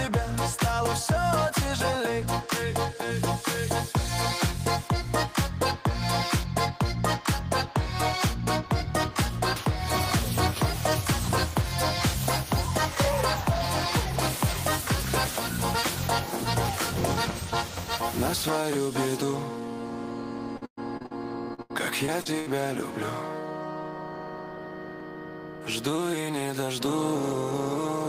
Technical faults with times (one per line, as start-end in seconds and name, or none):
20.57-21.13 repeated packet loss (robotic sound)
21.49-22.48 repeated packet loss (robotic sound)